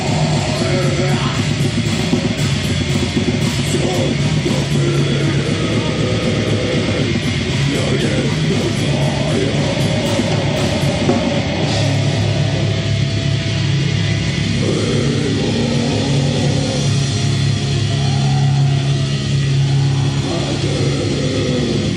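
No faults can be heard anywhere in this audio.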